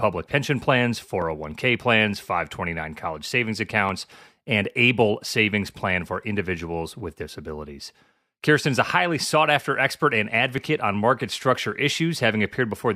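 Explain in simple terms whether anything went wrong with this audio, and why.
Clock drift buffer slips: clicks repeat every 1.34 s from 1.22 to 11.92 s, likely from two mismatched device clocks. The steady spacing distinguishes them from random dropouts.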